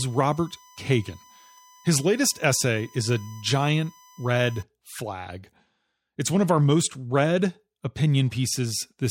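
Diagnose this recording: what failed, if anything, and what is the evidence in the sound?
USB whine, an analogue power/ground fault: a steady 1 kHz tone, roughly 30 dB below the speech, runs from 0 to 4.62 s. Its 1 ms frame rate rules out mains hum.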